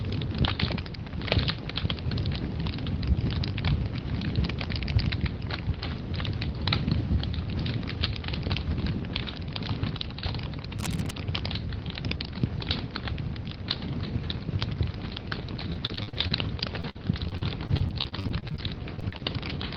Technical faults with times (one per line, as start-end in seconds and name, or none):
10.77-11.12 cable scratch noise
15.73-16.32 repeated packet loss (robotic sound)
16.80-18.60 repeated packet loss (robotic sound)
18.96-19.21 repeated packet loss (robotic sound)